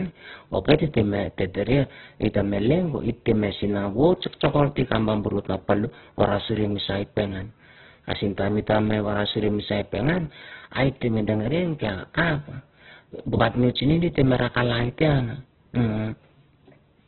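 Opus compression runs through the whole of this speech recording, first to last second. Nothing survives above about 4.2 kHz, so the sound is narrowband and boxy, and what remains is rough and grainy rather than swirling. That texture likely comes from the codec's music-style mode rebuilding starved bands from folded lower content and filler noise at a very low bitrate, which fits something near 8 kbps, leaving heavy damage across the entire clip.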